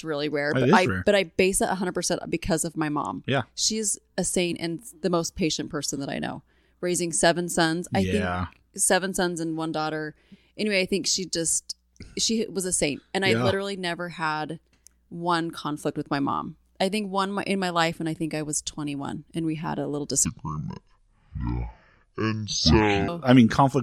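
Speech recording in which playback likely ran on the wrong clock, leaving a section at the wrong speed: after "we had a little", from 20.26 to 23.08 s it plays at 0.573 times speed, dropping about ten semitones into a deep, dragging sound.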